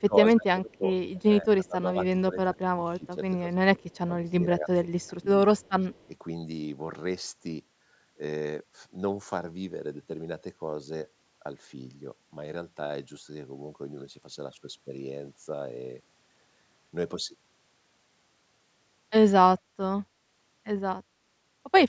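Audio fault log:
0.00–0.83, 1.16–3.82, 4.21–5.13 and 5.89–6.09 s: speech suppressed in double talk. The talker's level is pushed down in pieces, by about 20 dB at its deepest in the first two stretches, about 15 dB in the third, and only about 5 dB in the brief last one. The likely cause is the echo canceller hearing both sides at once and ducking everything. Unlike a network dropout, the sound dips and recovers rather than vanishing cleanly with clicks.
3.90–3.98 and 5.58–6.07 s: echo leak. A faint copy of the speech returns about 145 ms late, roughly 40 dB below the direct voice, first as a short scrap and then for about half a second. This is likely loudspeaker sound reaching the far microphone and slipping past its canceller. Unlike room reverberation, it is a distinct delayed repeat rather than a smooth tail, and it overlaps the last suppression dip at 5.89–6.09 s.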